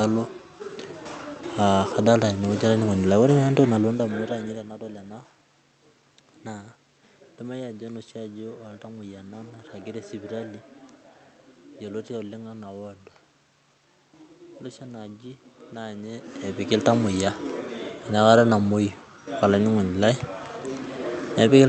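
No technical faults can be heard in this recording.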